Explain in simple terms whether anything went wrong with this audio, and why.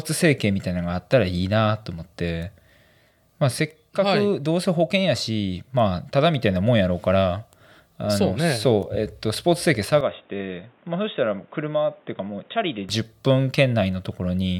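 From 10.01 to 12.89 seconds the speech turns dull and boxy, with nothing above about 3.8 kHz, and gets a bit quieter with a faint new hiss, then clears. That likely means the input switched to a poorer device. The changed loudness and background noise are what set it apart from simple muffling.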